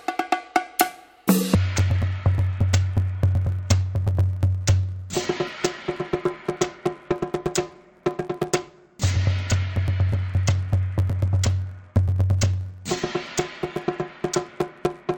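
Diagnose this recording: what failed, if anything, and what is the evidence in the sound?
Interleaved audio read as planar, from 1.55 s to the end of the clip, a failure in the sample-format conversion stage. The sound turns dull and robotic with a steady buzz near 94 Hz and no clear octave drop, because each 10.67 ms block of alternating left and right samples is split in half, each half played at half speed. The blocks are short, which fits a 512-sample buffer.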